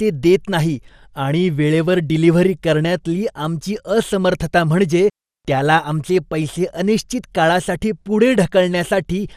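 Speech runs through the whole clip with MP2 compression damage, likely from a low bitrate around 80 kbps: the sound is dull and cut off above about 15.8 kHz, with gurgling, granular distortion as sub-bands drop in and out, unlike the smooth dullness of a simple low-pass filter.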